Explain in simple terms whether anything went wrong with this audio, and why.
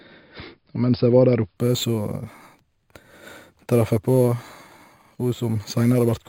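From 1.57 s to the end, the speech picks up a bright, metallic fizz on top of it that gets louder and softer along with the voice. This is imaging from sample-and-hold upsampling. The audio was converted to a higher rate by simply repeating each sample instead of smoothing between them, which fits an original rate of about 11 kHz. That leaves mirror-image copies of the sound, the lowest between about 5.5 and 11 kHz, heard as the fizz.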